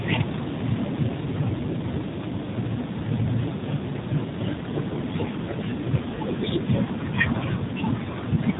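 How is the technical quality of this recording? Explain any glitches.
The quality is limited by AMR narrowband mobile codec damage, plainly audible for the whole clip. Nothing passes above 3.8 kHz, so a spectrogram shows an empty band over a flat ceiling. Coarse vocal-tract modelling, consistent with a low rate near 7.4 kbps, makes the speech sound buzzy and synthetic.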